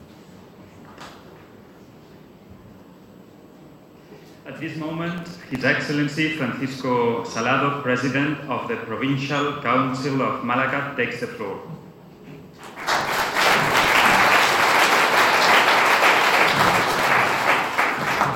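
At 5.18 to 5.61 s and again at 16.52 to 17.07 s, the processor falls behind and misses a few dozen buffer deadlines in a row, with buffers apparently well under a millisecond long. Each miss repeats a scrap of old audio with hard edges, so this processor overload crackle comes through as a gritty tearing burst over the sound that stops once the load eases.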